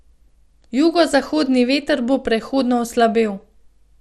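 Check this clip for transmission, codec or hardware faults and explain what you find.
The speech carries a codec fault from start to finish, most likely MP2 compression at a low bitrate. MPEG Layer II divides the spectrum into 32 sub-bands and shares out a limited bit budget among them. Here the budget runs short: the top bands are dropped, leaving nothing above about 13.6 kHz, and the surviving bands are coarsely quantised. The result is a dull, granular sound with a watery gurgle through the whole clip, consistent with a rate around 80 kbps.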